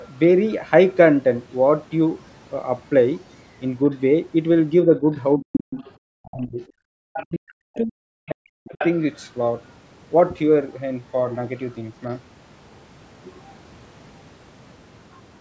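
At 3.91 s a brief scrap of a second voice slips in underneath, very faint at about 35 dB below the main speech. This is the other side's voice leaking through, most likely because the far end was playing on a loudspeaker and the echo canceller left a residue in the microphone signal. It returns, louder, from 5.12 to 5.92 s and from 7.14 to 7.77 s, sitting only about 15 dB under the talker, and again at 8.78 to 8.89 s at about 10 dB down.

From 4.91 to 5.63 s the talker's speech dips sharply, falling by as much as about 40 dB for roughly a fifth of a second in total. The same pumping recurs from 6.23 to 6.61 s, down about 30 dB, and most heavily from 7.25 to 8.79 s, where the voice is pushed down by up to about 40 dB for most of that stretch. This is speech suppressed in double talk. The overlap with the leaking voice points to both sides talking at once, and the canceller likely could not tell its own talker from the echo and turned everything down.

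Between 6.89 and 6.97 s the room background drops out for about 70 ms, falling by about 40 dB before coming back. This is background gated by the echo canceller: while the loudspeaker played, the canceller clamped the microphone hard, then released it.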